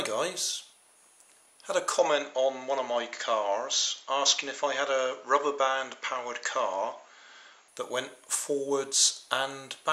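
From 1.99 to 7.68 s the sound goes duller, nothing above 7.6 kHz, with a faint new hiss, most likely an input switched to a poorer device.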